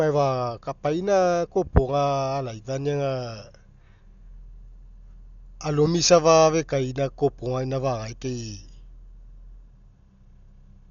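Dolby Digital compression, heavy, runs throughout the speech. Nothing reaches above 6.9 kHz, so the sound is dull and boxed in, and a rough, fluttering hiss clings around the voiced tones. The likely cause is an AC-3 style encoder starved of bits, which fits a rate near 48 kbps. It narrowed the band and left many frequency lines without detail, and the decoder filled them with noise instead of the original sound.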